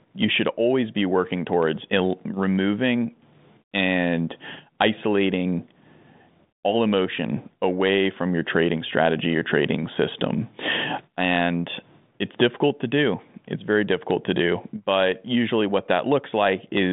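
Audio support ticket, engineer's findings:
Nothing stood out on listening; the speech arrives over a G.726 ADPCM link at 40 kbit/s, band-limited to roughly 150 Hz to 3.7 kHz with nothing above about 3.8 kHz, as that path normally sounds.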